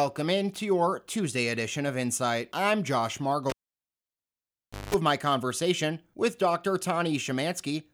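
Speech cuts out with a pop at 3.50 s, near silence follows for 1.4 s, then 0.19 s of 50 Hz mains buzz and a second pop as sound returns at 4.94 s: a live cable pulled and plugged in, the buzz coming as only the tip touched.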